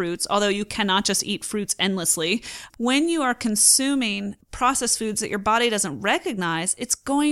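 A speech recording with no audible technical faults.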